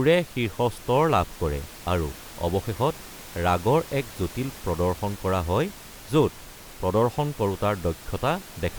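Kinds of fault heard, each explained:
No system faults detected; the only background is the room's own, sitting about 19 dB below the speech.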